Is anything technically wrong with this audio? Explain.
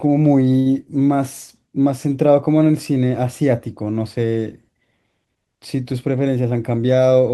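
Yes. A short stall from a late packet occurs at 0.59 to 0.67 s. A packet arrived late, the jitter buffer ran dry, and the receiver stretched the preceding sound by about 61 ms before resuming where it left off. Nothing is lost, but one sound is held unnaturally long.

A jitter buffer speed-up runs from 6.37 to 6.85 s. With excess audio queued, the receiver trimmed small pitch-period slices repeatedly, shedding roughly 50 ms. The speech plays about 11 percent faster at unchanged pitch and sounds hurried.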